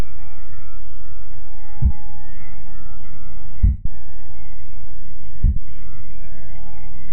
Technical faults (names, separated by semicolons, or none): lost LE Audio frames